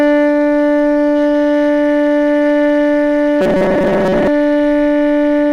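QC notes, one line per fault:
3.41 to 4.28 s, robotic sound from repeated short buffers: the music suddenly goes rigid and metallic, with a steady buzz at 188 Hz stamped over it. The likely cause is audio arriving too slowly, so playback keeps looping the last little chunk instead of waiting. A 188 Hz buzz fits a chunk of roughly 5.3 ms repeating back to back, and about half of what you hear in that stretch is those repeats rather than new material.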